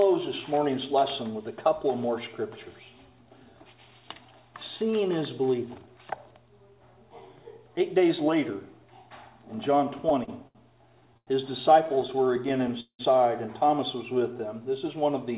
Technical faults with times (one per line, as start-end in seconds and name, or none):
9.98-10.57 repeated stalls (stutter)
11.01-11.29 repeated stalls (stutter)
11.87-13.01 repeated stalls (stutter)